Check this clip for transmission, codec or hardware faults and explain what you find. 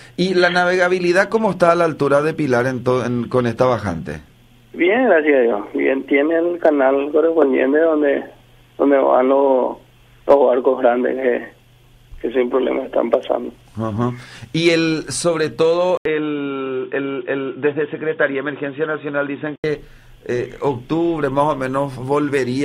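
One fault: from 15.97 s to 19.64 s, the input was likely switched to a poorer device, such as another microphone or a headset's call profile. That device passes a narrower band, so nothing above 3.8 kHz survives and the audio turns dull and boxy. An 80 ms silence marks the switch, a faint new background noise sits well below the signal, and the level stays about the same. At 19.64 s the full bandwidth returns.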